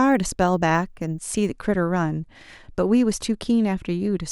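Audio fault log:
0.0–1.5 s: resampler restarted on every block. The converter ran on each 10 ms block separately and missed the neighbouring samples at each block edge, leaving a small error every 10 ms. Under the speech, this is heard as a 100 Hz buzz.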